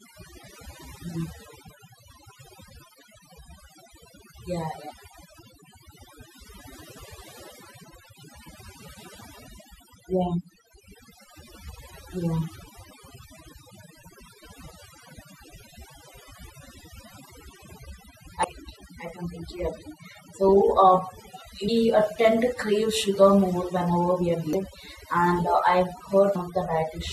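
Throughout the speech, a noise reduction stage set far too strong pulls individual frequency bands down or out whenever they sit near its noise estimate, taking quieter parts of the voice with them. This overdone noise removal leaves near-silent backgrounds full of twinkling specks.

Damaged data in a compressed stream then causes the decoder to misread frames and lose sync until it finds the next frame header. This produces brief chirps or blips at 7.83 s, at 18.43 s just before "I completely agree", at 21.67 s, at 24.53 s just after "we are", and at 26.35 s.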